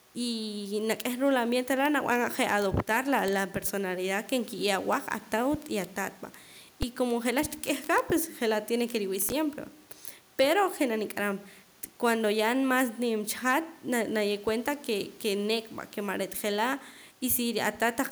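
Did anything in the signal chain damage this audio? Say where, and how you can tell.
No, nothing in the chain audibly damaged this speech.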